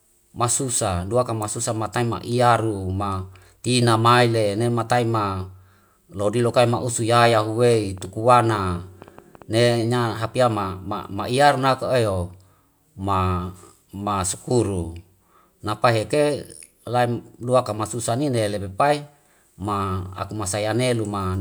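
A speech recording with a train of clicks from 7.74 to 9.43 s: around fifteen near-identical pops at about 7.7 per second, unevenly spaced and roughly as loud as the speech. That repeated identical shape sets it apart from random crackle, and it likely comes from electrical interference or a faulty connection or power supply.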